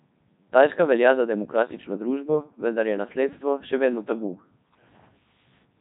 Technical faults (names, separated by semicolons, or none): Codec 2 vocoder